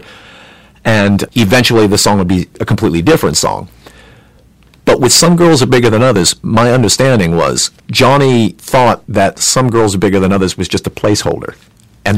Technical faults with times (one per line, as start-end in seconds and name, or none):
0.00-12.18 hard clipping